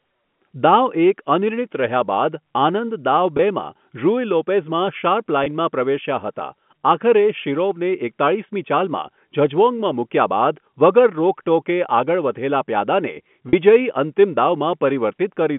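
Telephone-band speech, with packet loss with pitch repetition at 3.37–3.39 s and 5.44–5.46 s (about 20 ms each) and at 13.49–13.53 s (40 ms). The receiver fills each gap by repeating the last pitch period, so the gap sounds like a briefly held, buzzy note rather than a silent dropout or a click. The sound passes through G.711 coding limited to 150 Hz–3.4 kHz.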